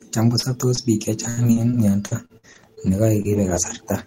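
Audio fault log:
0.39–3.76 s, repeated packet loss (robotic sound): over a dozen short holes, the longest 80 ms, are each patched by extending the preceding sound, rebuilding roughly half a second. Unlike a single dropout, the patches keep recurring, so speech turns choppy with pieces missing rather than briefly silent.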